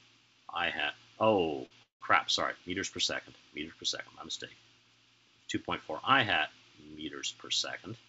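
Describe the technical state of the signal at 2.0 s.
At 2.0 s you're right at the tail of a call audio freeze running from about 1.83 to 2.03 s. Packets were likely held up, so the jitter buffer ran dry and the receiver stretched the last sound into a short fading buzz or hiss that drops to silence for roughly 140 ms. When the packets arrive, the audio picks up where it left off, so nothing is lost, but everything after that point runs about 0.18 s later. The call-codec coloring is there too, with nothing above 8 kHz, which fits G.722 at 64 kbps.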